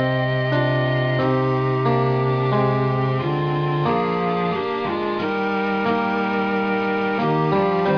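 Nothing stood out on listening to the clip.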